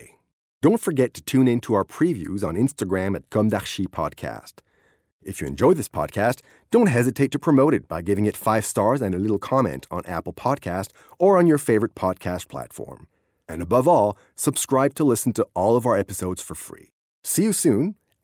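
No technical faults can be heard anywhere in the recording, and the signal stays steady and intact from its opening moment to its close.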